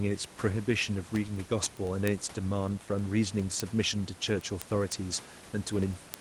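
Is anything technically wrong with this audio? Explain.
Yes. Word clock ticks run from 0.15 s to 6.14 s. An unlocked receiving clock, off by roughly 200 ppm, slips a sample about every 0.1 s, producing steady sharp ticks.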